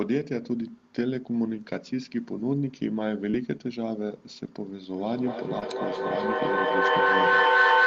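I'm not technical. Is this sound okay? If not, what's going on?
No, there are a few problems, and one of them is hard to miss.

The big one is a feedback howl that starts at about 4.98 seconds and runs to the end. It sounds like two devices in the same room are on this call, so the sound keeps looping from a speaker back into a microphone and getting louder each time round. It settles into a whistly tone around 1.5 kHz, with the sound going round the loop roughly five times a second, and gets louder than the speech itself.

There are also two spots with short concealed packet loss, at 3.31–3.35 and 5.59–5.63 seconds. A tiny piece of the call arrived too late to be played, so the receiving end patched the hole by stretching out the sound just before it. You'd hear it as a quick smear or little wobble.

Finally, there are three spots where a lost packet was rebuilt from error correction, at 1.49–1.51, 3.33–3.35 and 5.61–5.63 seconds. 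Each time a small chunk went missing, but the next chunk carried a rough backup copy of it, so there's no gap. That backup is lower quality, so those moments sound a bit grainier and noisier for a split second. The call line itself cuts the sound off at about 8 kHz, so those bits don't lose any extra treble.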